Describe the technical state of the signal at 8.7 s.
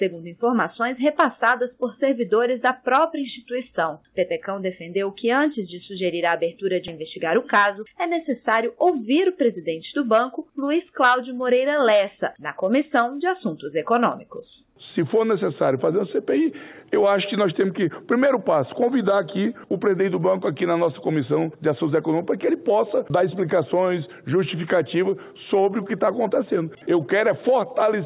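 At 8.7 s the sound is running slightly fast and feels hurried, with no shift in pitch. This is the tail of a jitter buffer speed-up lasting from 7.02 to 8.77 s, where playback runs at about 106% of normal speed. The receiver's buffer had built up more audio than it wanted, so it repeatedly cut out short pitch-period-length slices, removing about a tenth of a second in total. The narrowband G.711 call path, with nothing above 4 kHz, carries this through.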